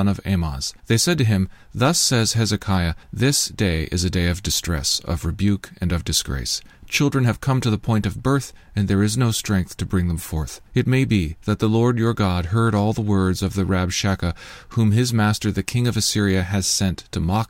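Nothing technically wrong turns up anywhere in this speech recording, so there's no fault here to point to or explain.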